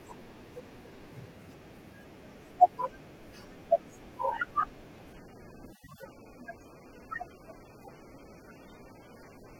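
At 5.13 s the speech abruptly drops in quality and stays degraded to the end at 9.59 s. This is an adaptive stream switching to a lower bitrate, after the connection slowed. The change sounds like a step from roughly 96 to 24 kbit/s AAC: nothing remains above 18.7 kHz, and there are more smeared codec artefacts. Unlike a dropout or reconnect, there is no gap or silence, just an instant switch in quality.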